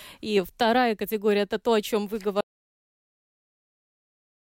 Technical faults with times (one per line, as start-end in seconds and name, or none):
2.41-4.43 audio dropout to silence